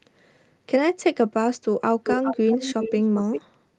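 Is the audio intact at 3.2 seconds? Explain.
No. From 2.04 to 3.41 s an echo leak adds a fairly loud copy of the speech 392 ms late, likely from an imperfect echo canceller, distinct rather than a smeared reverb tail.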